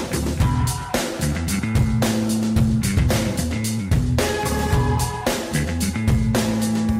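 Nothing is technically wrong with this audio.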